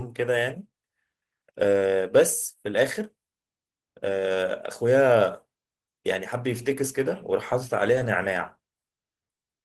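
At 7.95 to 8.01 s, a lost packet rebuilt from error correction. The 40 ms stretch, likely two packets, plays from a low-bitrate copy. It sounds briefly rougher and noisier.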